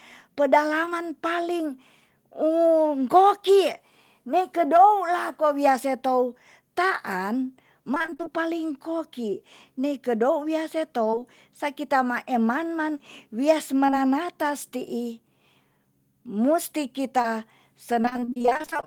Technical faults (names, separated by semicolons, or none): short concealed packet loss; repeated packet loss (robotic sound)